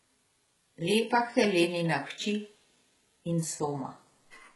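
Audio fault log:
Throughout, HE-AAC compression, likely: the top end stops dead around 11.5 kHz, and the treble below that sounds synthetic, with gritty, lispy s sounds. That's copied-up lower bands standing in for real highs, and the heavy damage fits a very low bitrate, something like 12 kbps.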